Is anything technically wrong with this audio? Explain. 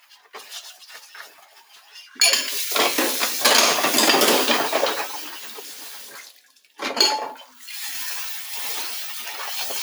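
Yes. A noise suppressor built for speech has been left running on this material, treating steady parts and tails as noise, so the level pumps by about 10 dB throughout.

There's also sound cut by the noise suppressor at 0.0 to 0.34 s, 1.29 to 1.95 s, 5.07 to 6.79 s and 7.44 to 7.68 s. It mistakes sustained sound for noise and pulls it down by about 8 to 9 dB, so those stretches sink and thin out.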